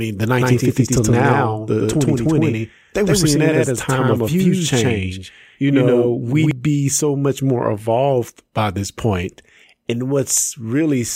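From 0.41 s to 6.51 s the speech carries a doubled audio track: a second full-band copy trails the original by roughly a tenth of a second at about the same level. The result is a flat, slapback-like repeat with no decay or room colouring. The likely cause is the signal being captured twice, once through a slower path. The copy starts abruptly just before "be so much more".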